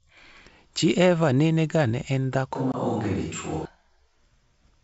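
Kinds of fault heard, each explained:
Switch to a distant microphone: from 2.55 to 3.65 s, just after "ga ne en dhako", the sound turns roomy and hollow and loses bass at once, then snaps back just as suddenly. The level stays about the same, and a faint room noise sits roughly 35 dB below the speech. The likely cause is that the close microphone dropped out and a farther one, such as a camera's, carried the sound for that stretch.
Packet loss on an ADPCM call: at 2.72 to 2.75 s, inside the distant-microphone stretch, a hard-edged hole of about 20 ms cuts in, which fits one lost packet. The gap is filled with silence, so the decoder's predictor and step size no longer match the sender's. The sound resumes with a little distortion, then settles within tens of milliseconds as the decoder's state catches up.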